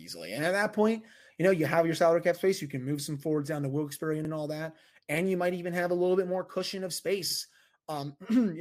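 At 1.2 s, after "at that point" and before "you know you have", the speech stutters briefly. It happens again at 4.25 s, just before "all that and you". A third time comes at 7.3 s, after "bit more cushion of". These are overlapping chunks. The audio was handled in 3-second pieces, and each piece began 50 ms before the previous one ended. That 50 ms plays twice at every join, giving a quick click-like repeat every 3 seconds.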